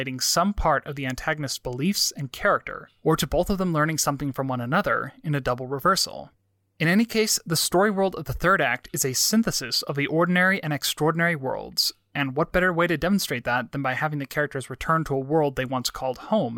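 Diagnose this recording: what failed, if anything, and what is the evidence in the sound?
Nothing in the signal chain has failed: the speech has no dropouts, clipping, distortion, noise bursts or timing irregularities anywhere along it.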